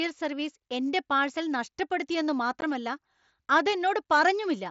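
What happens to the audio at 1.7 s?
Nothing goes wrong at 1.7 s: the speech carries straight through that moment with no dropout, click or distortion, passing over the Bluetooth mSBC headset link as it does elsewhere.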